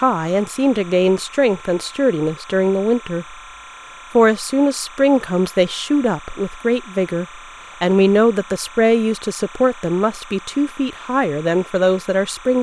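Linear timecode running at 29.97 frames per second has leaked from a neighbouring track or cable into this speech recording and stays there from start to finish. The code is a square wave that flips between two pitches, around 1 kHz and 2 kHz, so the bleed comes through as a constant chirping warble sitting roughly 20 dB beneath the speech. It is quiet but steady.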